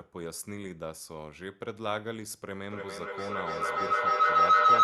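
At 2.71 s a feedback howl begins and runs to the end of the clip. Two devices on the same call are sharing a room, so the microphone picks up the loudspeaker and each trip around the loop comes back louder. The repeats narrow onto a tone near 1.5 kHz that pulses roughly every third of a second, the loop's delay. It climbs to about 17 dB above the speech, heard through a call codec's band limit of around 12 kHz.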